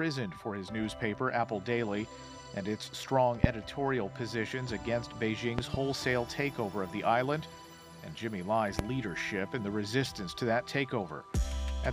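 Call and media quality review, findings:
Loud pop, 3.44–3.47 s, single sharp transient about 25 dB above the audio, which continues underneath. Likely an electrical step from a connector, switch or static discharge, shaped into a short pulse by downstream circuitry. Loud pop, 5.59–5.77 s, two pops in quick succession, about 20 dB above the audio. Loud pop, 8.79–8.82 s, single pop, about 20 dB. Same mechanism: a voltage pulse summed onto the signal path.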